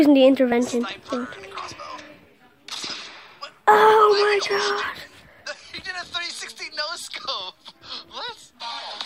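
At 0.52 s a sudden jump in the sound, likely a dropped buffer (overrun), where roughly 20 ms went unread and the edges were spliced together.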